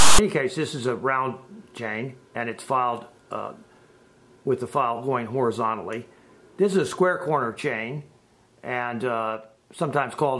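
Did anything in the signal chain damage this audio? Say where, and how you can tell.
Yes. At storage or playback, file tags were played as audio: from 0.0 to 0.19 s text metadata is decoded as samples, giving a loud, hard-edged rasp. The waveform shows a block pushed off-centre to one side; the spectrogram shows a broadband smear with abrupt edges.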